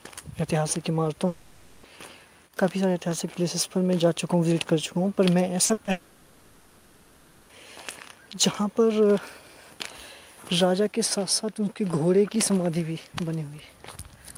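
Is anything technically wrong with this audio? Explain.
Yes, the stream was interrupted in two ways.

A long network dropout is the likely cause of the gaps at 1.27 to 1.85 s and 5.91 to 7.51 s. Audio stopped arriving for about 560 ms and then 1.58 s. The receiver bridged both gaps by extending the last sound, heard as a fading buzz or hiss with no true silence, before the audio resumes with that stretch missing.

Short concealed packet loss occurs at 5.65 to 5.71 s, 5.73 to 5.79 s and 5.85 to 5.89 s, just before the second dropout. Chunks of 40, 40 and 20 ms were lost and patched with extrapolated sound, leaving brief smears and wobbles.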